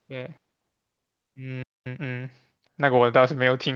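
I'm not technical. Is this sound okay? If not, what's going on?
No, there are a few glitches. At 0.37 s there's a skip ahead: a chunk of speech, roughly 0.4 s of it, is simply dropped, and the audio on either side of the hole is butted right together, so you hear a sudden jump forward with no pause.

Twice there's a jitter buffer speed-up, from 0.47 to 1.35 s and again from 2.51 to 2.99 s. The system was holding more audio than it wanted, so it snipped out tiny slivers to catch up. Speech runs about 12% fast at normal pitch, sounding a bit rushed.

At 1.63 s there's a playback stall: the sound just stops dead for about 0.23 s, then carries on. The likely cause is the player running dry of incoming audio and going silent until more showed up.

Right after that, from 1.86 to 2.08 s, comes a time-compressed catch-up. To make up for the lost time, the player squeezes that stretch to double speed by cutting out little pieces, so it sounds hurried, though the pitch stays put.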